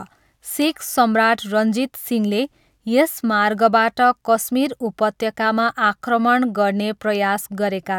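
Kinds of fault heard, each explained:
No technical faults heard.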